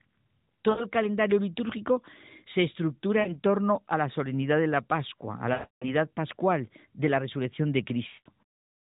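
Brief dropouts that smear and fade break the speech at 0.70 s (about 80 ms, just before "calendario litúrgico se"), 3.20 s (about 60 ms, before "torno a la solemnidad"), 5.54 s (280 ms, fading to silence) and 8.08 s (180 ms, after "pascual de la resurrección"). These are lost AMR speech frames: the decoder stretched the last good frame with falling gain through the narrowband mobile audio.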